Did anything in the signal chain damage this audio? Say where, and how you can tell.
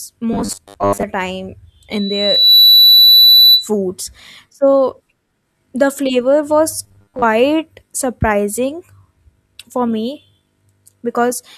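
Yes, in three places. From 0.33 to 1.04 s, and again from 6.84 to 7.25 s, the speech turns into a stiff, metallic buzz pinned at 100 Hz. That's robotic sound from repeated short buffers, and the likely cause is the driver or buffer stage starving. When fresh audio doesn't arrive in time, the last 10 ms gets replayed over and over. That 10 ms loop is what sets the 100 Hz buzz, and about half of what you hear in those stretches is repeated material rather than new audio.

The second problem is acoustic, on the analogue side between loudspeaker and mic. From 1.91 to 3.68 s there's a loudspeaker feedback squeal, a single tone at 4 kHz that swells up over well under a second and ends up roughly 10 dB louder than the speech. The mic is hearing its own loudspeaker, and at 4 kHz the loop gain tipped past one, so that frequency kept feeding itself until it dominated.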